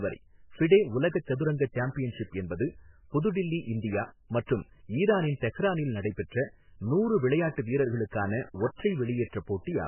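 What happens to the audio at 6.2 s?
At 6.2 s the speech carries the heavy damage of what is likely MP3 compression, present across the whole clip rather than starting there. Nothing above 3 kHz survives, so the treble is gone and the sound is dull. Short of bits, the encoder discards weak frequency lines that flicker in and out between frames, giving a watery, swirling texture and smeared consonant onsets. This fits a very low bitrate, around 8 kbps.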